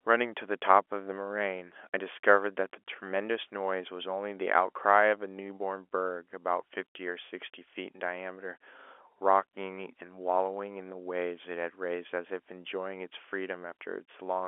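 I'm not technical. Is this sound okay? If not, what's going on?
Yes, nothing in this speech recording is broken, and the slightly narrow, phone-like quality comes from ordinary landline telephone coding doing its normal job.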